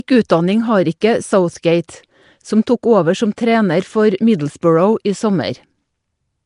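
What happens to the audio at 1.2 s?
At 1.2 s the speech carries the same damage heard across the whole clip, most likely Nellymoser compression. It is plainly audible. A rough, hissy halo clings to the speech, and the sound has a smeared, underwater quality. Nothing reaches above about 10.6 kHz. The codec works in short blocks with a fixed, small bit budget. Quiet bands get no bits and are refilled with noise. The damage fits a rate near 44 kbps.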